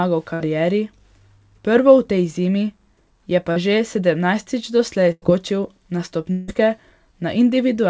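Right at the start, 0.34 to 0.42 s, there's a burst of packet loss. About 60 ms never arrived, so the receiver stretches the last sound into a brief held buzz or fading hiss, then jumps ahead past the missing bit. The same thing happens at 5.12 to 5.24 s, only longer: roughly 100 ms is lost, the filled-in sound dies away, and about 30 ms goes quiet before the audio picks up further on.

At 3.52 to 3.58 s there's a short concealed packet loss. About 40 ms went missing, and the decoder smoothed over it by continuing the previous sound and blending back in. You hear a quick smear or wobble rather than a proper gap.

From 6.32 to 6.50 s the sound turns into a fading, artificial buzz or hiss for about 160 ms, then resumes with that stretch gone. The likely cause is a long network dropout, with concealment filling the whole hole so it never falls fully silent. Throughout the clip, nothing reaches above 8 kHz, which fits the G.722 call codec.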